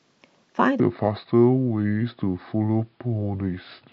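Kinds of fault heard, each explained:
Section at the wrong speed: from 0.8 s to the end, the speech plays at 0.685 times its speed, dropping about seven semitones, likely from playback on a mismatched clock. Pitch and tempo fall together, unlike a pitch shift or time-stretch, which changes only one.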